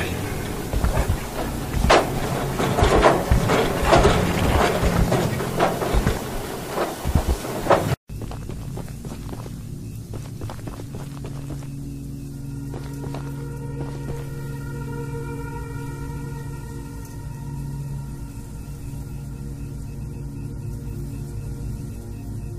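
Frames out of order hit at 16.06–16.25 s, 19.94–20.14 s and 21.71–21.90 s: two neighbouring blocks of about 93 ms swap places, which fits runs of four frames each. You get a garbled flutter, but no time lost.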